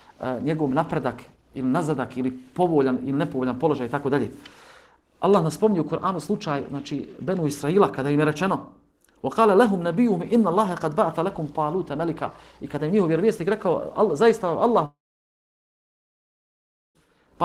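Long network dropout, 14.85 to 16.96 s: likely lost packets leave a brief fading buzz, then about 2 s of silence before audio resumes.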